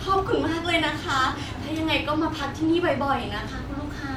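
Speech recording, no technical faults detected anywhere in the audio.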